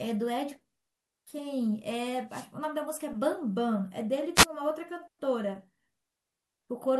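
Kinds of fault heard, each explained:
Wireless microphone noise hit: the speech drops under two short bursts of hiss, one from 2.29 to 2.48 s and a briefer one from 4.35 to 4.46 s. The radio signal from an analogue FM microphone fades when reflected paths cancel, so the receiver's own noise rises and swamps the audio. Unlike steady background hiss or a digital dropout's clean gap, each hit is a swish of static that swells and clears within a fraction of a second.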